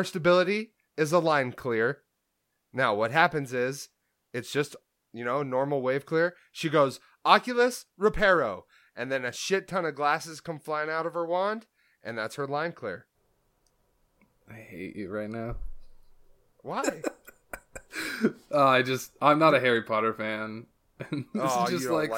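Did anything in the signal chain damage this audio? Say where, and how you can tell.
No, nothing in the chain can be heard damaging this speech at any stage.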